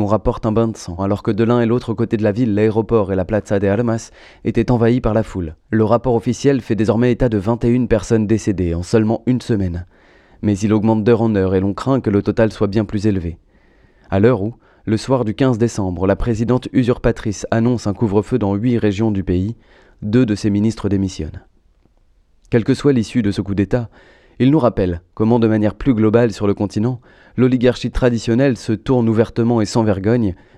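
No technical faults can be heard in this recording.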